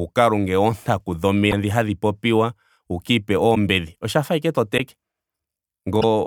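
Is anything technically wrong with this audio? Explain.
Yes. There are four brief glitches: 1.50–1.53 s, just after "lunge oontaku", 3.54–3.57 s, after "hadhi popiwa wuka ipe", 4.77–4.80 s, after "fa ashike to", and 6.00–6.04 s. The first three each last about one 26 ms frame, the last about 41 ms. The sound breaks up for an instant and then jumps ahead. The likely cause is a broken MP3 bit reservoir. Frames went missing, so the next frame decoded against the wrong borrowed bytes.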